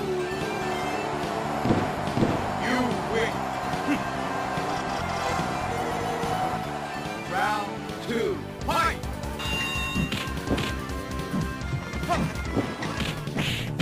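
No technical faults can be heard anywhere in the clip. There is nothing in the sound that calls for comment.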